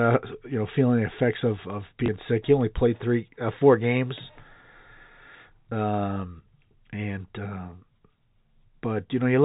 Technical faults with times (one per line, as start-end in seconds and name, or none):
2.06-2.08 packet loss with last packet repeated